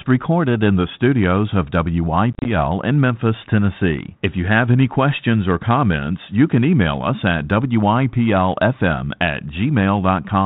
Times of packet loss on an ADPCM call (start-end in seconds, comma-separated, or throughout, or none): 2.33-2.48